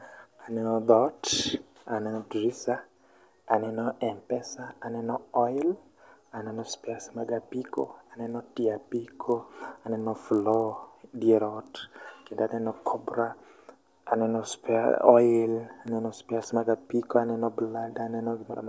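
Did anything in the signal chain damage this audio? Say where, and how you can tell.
Yes. From 7.76 to 11.22 s, between "aneno spares mag" and "dier ot", there's a resampler restarted on every block in the sample-rate conversion stage. You hear a 50 Hz buzz riding on the speech, which points to 20 ms blocks, and it fits a 24 kHz to 16 kHz conversion. Each block gets converted on its own, so its edges are filtered without the real neighbouring samples, leaving a small glitch at every boundary.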